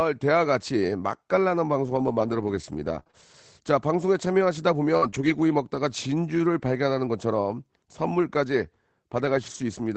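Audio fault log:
1.83–9.56 s, scattered short gaps: About seven packets went missing or arrived too late across this stretch, around 140 ms of audio in all, none much longer than 50 ms. The receiver covered each hole by extending the last sound it had, so the speech stays clear but picks up brief ticks, smears and small hiccups, heard over the call codec's band-limited sound, which tops out near 8 kHz.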